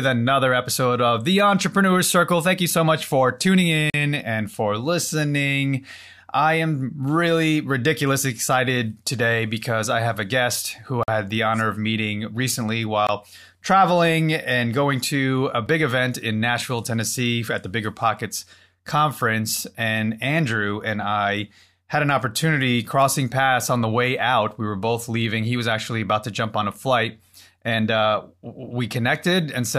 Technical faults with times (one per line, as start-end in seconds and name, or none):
3.90-3.94 block of digital silence
11.03-11.08 block of digital silence
13.07 block of digital silence
15.66 block of digital silence